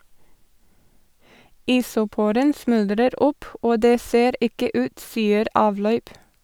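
Nothing in this speech recording stood out as a technical problem on listening.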